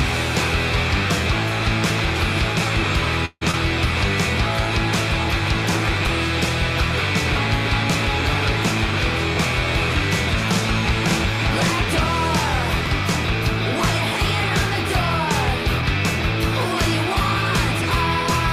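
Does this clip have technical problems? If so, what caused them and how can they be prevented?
Yes. A call audio freeze occurs from 3.25 to 3.43 s. The last sound is stretched for about 158 ms, fades, and ends in a brief silence. It likely comes from delayed packets draining the jitter buffer. Playback then resumes where it stopped. A deeper adaptive jitter buffer and a steadier network route would prevent this.

Short concealed packet loss follows at 3.51 to 3.55 s. About 40 ms of audio never arrives in time. A 20 ms continuation smears over the hole, and playback skips ahead. Forward error correction or redundant packets would prevent this.

Chunks out of order appear at 12.86 s. One short block, which fits a chunk of about 5 ms, plays one slot late. The result is a brief jumble with hard joins. Sequence-checked writing to the buffer would prevent this.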